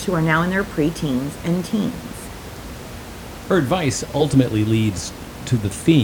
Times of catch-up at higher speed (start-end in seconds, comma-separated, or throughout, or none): none